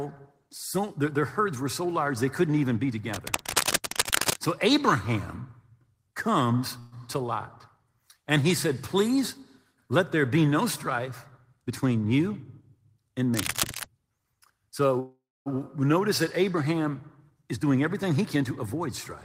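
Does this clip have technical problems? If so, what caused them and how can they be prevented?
Yes. There are three kinds of fault, each heard twice.

Cable scratch noise appears from 3.14 to 4.47 s, right after "they couldn't even be", at about the same level as the speech. It returns from 13.33 to 13.86 s, about 5 dB below it. The likely cause is a worn cable or connector being moved, so that its contact resistance jumps rapidly. Unlike broadband hiss, this rustling is dense and uneven and stops once the movement ends. Replacing or securing worn leads prevents it.

Call audio freeze occurs from 6.79 to 6.94 s, where 125 ms of extended, fading sound fills the pause. It happens again from 15.00 to 15.48 s, just before "notice that". There 461 ms is inserted and 260 ms of it drops to silence. Delayed packets likely emptied the jitter buffer. Unlike a dropout, nothing is lost, because the sound resumes where it stopped and only arrives later. 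A steadier network path or a deeper jitter buffer prevents it.

Jitter buffer speed-up runs from 11.63 to 12.89 s, after "there be no strife", and again from 17.34 to 18.81 s. Each time the audio plays at 109% speed, with roughly 150 ms trimmed out. The receiver cut short pitch-period slices to drain a backlog of audio that had arrived late together. Unlike a pitch shift, the speech sounds hurried but keeps the same pitch. Reducing network jitter so that bursts don't pile up prevents it.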